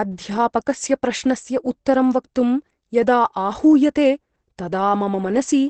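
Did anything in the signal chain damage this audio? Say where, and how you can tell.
Yes, at the codec stage, and throughout the clip. The speech sounds muffled and hoarse, which is heavy damage most likely from Opus compression running in its SILK speech mode at a low bitrate near 12 kbps. A spectrogram would show a flat ceiling with nothing above 8.6 kHz for the whole clip. Below that ceiling, the harmonic detail looks coarse and smeared rather than cleanly striated.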